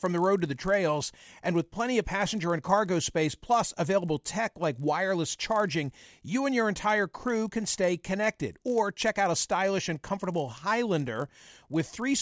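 Throughout, the speech carries a faint 50 Hz buzz under the signal. The resampler restarted on every 20 ms block, nicking each block edge.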